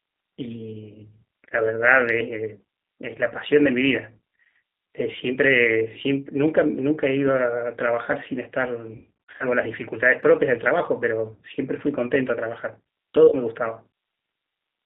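The whole recording passed through a G.729 codec, almost certainly the G.729A variant. It rebuilds each 10 ms frame from a vocal tract filter, a pitch predictor and a few pulses, and its coarse, low-rate sound fits 8 kbit/s coding. The line band runs from 200 Hz to 3.7 kHz, so the speech is thin and muffled, and the rough, slightly synthetic texture of the coding is plainly audible throughout.

From 8.96 to 9.45 s, VoIP packet loss concealed by the speech codec sets in. About 260 ms of audio went missing, scattered over 440 ms, with no single gap longer than 60 ms, which fits thirteen 20 ms packets. Each time, the decoder stretched its last pitch and filter and faded the gain, so the speech is drawn out into a buzzy tone or coloured noise that fades, and it stays smeared briefly after the packets return. A shorter loss of 40 ms, matching two packets, falls between 13.28 and 13.35 s and gives a brief dip.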